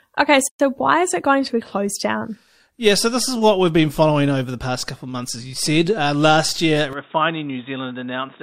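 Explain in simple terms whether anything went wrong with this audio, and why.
Two things went wrong. Separately encoded pieces were joined without trimming, leaving a gap at a join of encoded pieces: a sudden 120-millisecond silence at 0.48 to 0.60 seconds before the speech resumes.

At 6.93 seconds, the recording likely switched its input to a poorer device. From there to the end, the speech turns duller, with nothing above 3.8 kHz, slightly quieter, and with faint new background noise.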